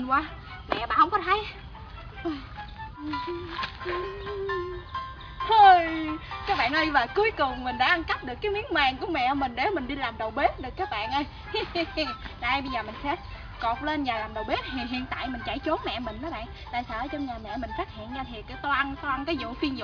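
No technical faults can be heard anywhere in the audio.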